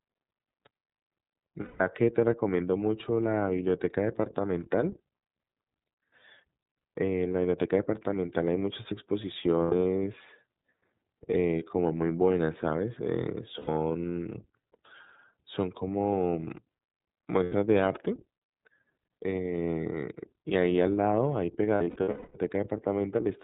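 The speech has passed through the iLBC codec, a narrowband VoIP coder that encodes each frame's excitation independently. Nothing above 4 kHz survives, and the coding damage is plainly audible as a rough, slightly synthetic edge throughout, which fits iLBC's 30 ms, 13.33 kbps mode. Lost iLBC frames also occur. When packets go missing, the decoder fills the hole by repeating the last pitch cycle blended with noise, and each gap comes out as a held, faintly buzzy or breathy vowel. This happens from 1.62 to 1.81 s (about 180 ms, in line with six 30 ms frames), and for about 90 ms each at 9.63 to 9.73 s, 13.58 to 13.69 s and 17.43 to 17.53 s. From 21.75 to 22.37 s, about 450 ms of losses are scattered across 600 ms, with the longest run around 200 ms, and the held sound fades there. Because each frame stands alone, the speech recovers almost immediately after every gap.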